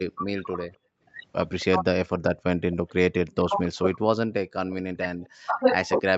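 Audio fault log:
0.12–1.65 s, 2.72–2.90 s, 5.25–5.29 s: echo leak. A faint copy of the speech returns 267 ms late, about 25 dB down (about 35 dB at 5.25 s), likely far-end loudspeaker sound the echo canceller missed.
0.17–0.69 s, 1.66–1.85 s, 2.93 s to end: speech suppressed in double talk. The speech dips and breaks up, at worst by some 30 to 40 dB, likely because the canceller mistook overlapping talk for echo.
0.97–1.03 s: background gated by the echo canceller. The room sound drops by about 20 dB for well under a tenth of a second while the canceller clamps the microphone, then returns.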